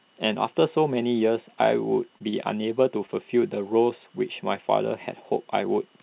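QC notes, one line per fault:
2.18–2.22 s, 2.30–2.34 s and 3.06–3.10 s: short concealed packet loss. About 20 ms of audio failed to arrive in each case. The receiver bridged each gap with roughly 16–21 ms of synthesised continuation of the preceding sound, then crossfaded back into the real signal. This produces three brief smears or wobbles, with the first two close together. On a spectrogram, each spot shows harmonics stretched flat or a noise smudge where the real detail should change, below the 4 kHz ceiling of the G.711 path. The waveform shows a repetitive stretch followed by a blend seam.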